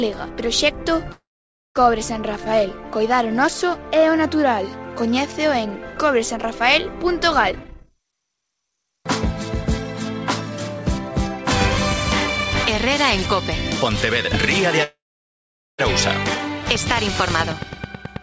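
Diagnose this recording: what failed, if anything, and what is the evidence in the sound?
Call audio freeze, network and jitter-buffer stage: at 1.12–1.79 s and 14.84–15.82 s the sound stalls into a fading buzz, then near-silence (about 0.53 s and 0.82 s). It resumes where it stopped, adding 0.64 s and 0.95 s of delay, likely from delayed packets. Unlike a dropout, nothing is lost.

Jitter buffer speed-up, call processing in the receiver: from 7.51 to 9.00 s the audio runs at 137% speed while pitch stays put, trimming roughly half a second of backlog in small pitch-period cuts. Constant pitch separates it from a resampling or clock-rate error, which would shift pitch too.

Train of clicks, analogue wiring or interface stage: from 16.75 s to the end at 18.22 s, evenly spaced pops at 9.2 per second, about 10 dB above the signal, likely interference. Their near-identical shape and steady pace distinguish them from random codec crackle. 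The G.722 path caps content at 8 kHz.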